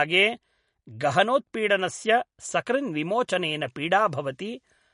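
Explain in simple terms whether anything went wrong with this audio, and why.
Throughout the speech, the sound is dull and plainly watery, with nothing above about 10.6 kHz, so the crisp top end is gone. That is likely MP3 compression at a low setting, which cuts the treble and drops quieter detail.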